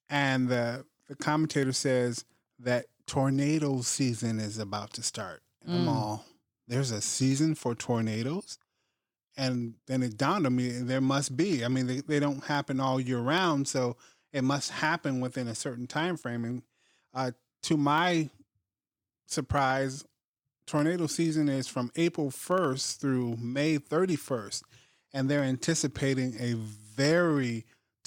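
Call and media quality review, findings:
Periodic USB or driver dropouts, 0.10–28.01 s: regular ticks every 64 ms, about 16 per second, hundreds in total. Each is a sub-millisecond skip with no silence inserted, heard only under speech. The fixed spacing rules out random packet loss. Probable component: USB bus or audio driver, stalled by a background task.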